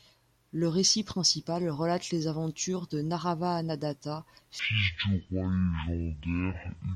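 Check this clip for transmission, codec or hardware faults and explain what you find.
There's one fault, a section at the wrong speed: from 4.59 s to the end, the speech drops to 0.52x speed, deep and dragging, pitch about ten semitones lower, likely from playback on a mismatched clock.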